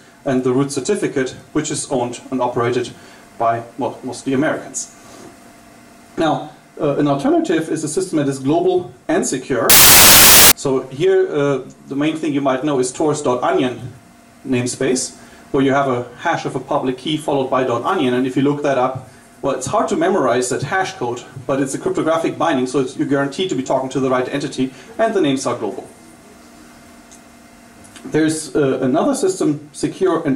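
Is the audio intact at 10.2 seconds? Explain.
No. From 9.70 to 10.52 s, samples are built from the wrong bytes. Low bits become the large part of each value. It sounds like loud, harsh broadband noise.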